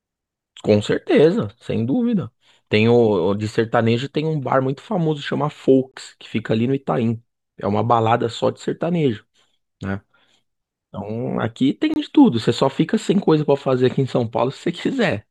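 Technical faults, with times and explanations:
5.92–5.94 s and 11.94–11.96 s: gap between chunks. The speech stops dead for about 23 ms at each join, six seconds apart, because the audio was delivered in 6-second chunks and silence sits between them rather than any sound being lost.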